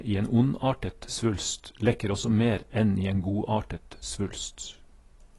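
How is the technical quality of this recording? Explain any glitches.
The recording has one problem, and it runs the whole way through: the speech is band-limited and smeared, with nothing above about 11.5 kHz. That's most likely AAC compression. An AAC-LC encoder squeezed for bits drops the top of the spectrum and quantises what's left coarsely. The damage is plainly audible here, a dull top end with a watery, fizzy edge on the sibilants, which fits a bitrate somewhere around 32 kbps.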